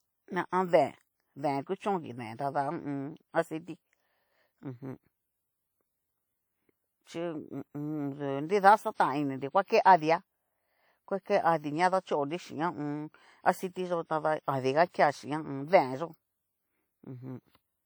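Throughout, the audio was likely passed through WMA compression with long transform blocks, a damage level that fits a low bitrate near 48 kbps. Quantisation noise smears across tens of milliseconds, so the speech sounds plainly ringing and washy, with hiss breathing alongside it, while content still reaches about 20.1 kHz.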